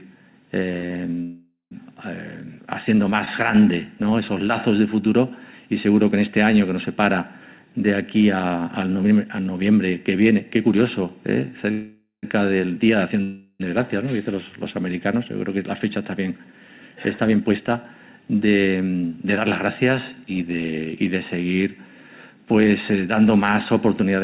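Scattered short gaps run from 0.72 to 3.29 s. About four lost or late packets leave tiny holes, the longest around 50 ms, each patched by continuing the previous sound, so brief ticks and smears appear.

Call audio freezes occur at 1.22–1.73 s, 11.71–12.25 s and 13.23–13.62 s. The sound stalls into a fading buzz lasting 0.49, 0.51 and 0.37 s, the first two ending in about 0.12 s of silence, and then resumes where it stopped. The likely cause is held-up packets draining the jitter buffer.

A jitter buffer slow-down from 3.55 to 4.11 s repeats pitch periods to rebuild reserve, adding 41 ms. The audio plays at 94% speed, slightly drawn out at unchanged pitch.

Jitter buffer speed-ups span 6.14–9.21 s, barely noticeable at 101% with about 50 ms trimmed, and 16.74–20.50 s, audibly hurried at 109% with about 0.4 s removed, as the receiver cuts pitch periods to shed excess delay.

Throughout, nothing is heard above 4 kHz, consistent with a narrowband call codec such as G.711.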